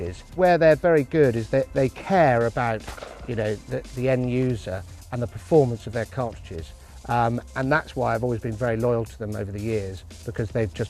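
No technical faults can be heard anywhere in this audio.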